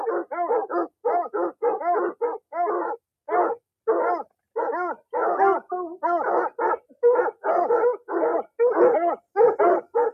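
No technical faults are audible.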